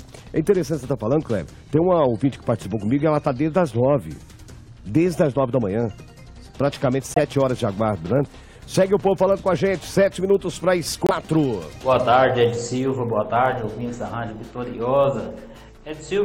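A corrupt frame muted fault occurs twice. Damaged compressed data was rejected by the decoder and replaced with silence, so the sound drops abruptly into a gap at 7.14 to 7.45 s, then again at 11.04 to 11.36 s, with timing preserved.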